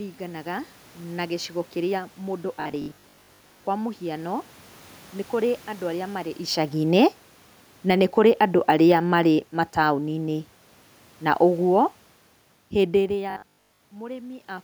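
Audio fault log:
2.56–3.64 s and 13.31–13.81 s, robotic sound from repeated short buffers: the speech turns into a rigid metallic 50 Hz buzz. It is likely caused by late audio, with the last 20 ms replayed over about half, then most, of each stretch. The spectrogram shows even 50 Hz harmonic stripes, and the waveform shows identical repeating cycles.
7.75–10.43 s, automatic gain falling: the gain control judged the input too loud or its background noise too strong and eased it down by about 5 dB, so the speech and the room noise sink together. The waveform envelope tapers steadily, and the spectrogram darkens evenly across all frequencies, including the noise floor.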